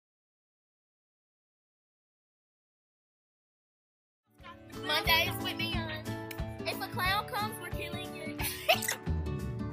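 Nothing stood out on listening; no technical problem could be heard anywhere in the audio.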